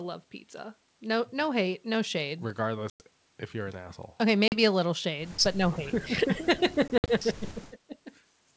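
At 2.90 to 3.03 s the audio breaks into a hard-edged silent gap of about 100 ms, which fits a handful of lost packets. This is packet loss on an ADPCM call. The gap alone is not what identifies it. When the sound comes back, the decoder's adaptive predictor and step size no longer match the sender's, so the speech resumes slightly distorted before settling. A shorter hole of about 40 ms at 4.48 to 4.58 s does the same.

From 5.55 to 8.06 s the talker's level dips repeatedly, by as much as about 15 dB at the deepest, with around a second of speech affected in all. This is speech suppressed in double talk, likely from an echo canceller turning the near talker down while the far side was also speaking. Unlike loss gaps, these dips leave no reset artefacts behind.

At 5.72 to 5.77 s a faint copy of the voice surfaces, delayed by 316 ms and around 20 dB below the main speech. This is echo leak, likely residue that the loudspeaker-side echo canceller failed to remove. 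It adds a ghost of earlier sound instead of removing any.

At 6.88 to 7.09 s packet loss returns as several short holes scattered over 200 ms, totalling 100 ms, with the longest lasting 60 ms. Each hole ends in the same misadjusted restart.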